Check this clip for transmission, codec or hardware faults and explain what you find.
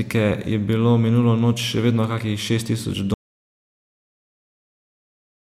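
One fault: an audio dropout to silence from 3.14 s to the end. The input was likely lost through a disconnected device or failed link while recording continued, writing silence. The speech stops abruptly after "vedno kakih šest tisoč" and never returns, leaving silence without any room tone.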